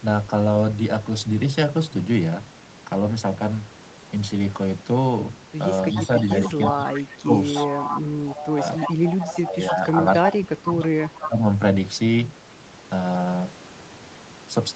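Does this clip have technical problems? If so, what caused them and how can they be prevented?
Yes. From 5.9 to 11.27 s a second copy of the speech trails the original by about 0.3 s, around 10 dB quieter: an echo leak, likely from a loudspeaker-side echo canceller failing to remove what its microphone picked up. Using a headset on the far end, or better echo cancellation, would prevent it.

Between 6.07 and 11.41 s the talker's voice dips and breaks up, dropping as much as about 15 dB for roughly 2 s in total. This is speech suppressed in double talk: the canceller likely mistook overlapping speech for echo. Avoiding talking over each other, or using a headset so there is no echo to cancel, would prevent it.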